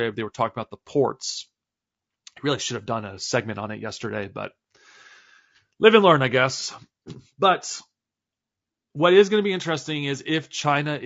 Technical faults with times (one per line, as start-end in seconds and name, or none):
0.00-11.06 low-delay AAC compression